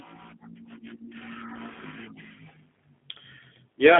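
From start to finish the speech carries G.729 codec damage, plainly audible. The voice is rebuilt from a vocal-tract filter, pitch predictor and sparse pulses, so it sounds rough and slightly synthetic, a quality that fits an 8 kbit/s G.729A link. The line band runs about 250 Hz to 3.5 kHz. On a spectrogram the energy stops at a flat ceiling, with nothing above 3.8 kHz and little below 250 Hz.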